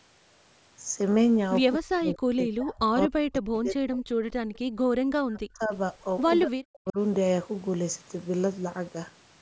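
Speech passing through a call chain where two devices likely run on unsynchronised clocks, drifting apart by roughly 70 ppm, produces clock slip clicks. A single sample is dropped or repeated each time the error adds up to a whole sample, leaving faint regular ticks about every 0.3 s, some thirty in all, from 0.31 s to 9.39 s. The echo canceller likely mistook simultaneous talk from both ends for echo, causing speech suppressed in double talk. It pulled the voice down by around 40 dB, so it dips and breaks up from 1.79 to 4.2 s, from 5.06 to 5.73 s, and from 6.45 to 6.98 s. Between these, the canceller also clamped the microphone while the loudspeaker played, producing background gated by the echo canceller. The room sound drops by about 38 dB from 4.48 to 4.77 s, then returns as the canceller releases.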